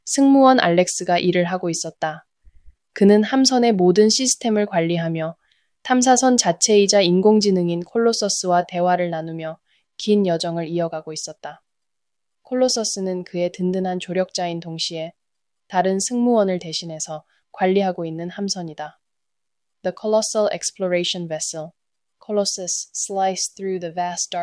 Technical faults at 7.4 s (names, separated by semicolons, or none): none